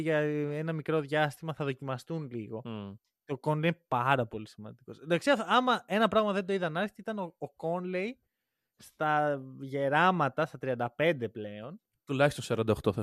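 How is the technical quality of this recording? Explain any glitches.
No glitches can be heard anywhere in this recording.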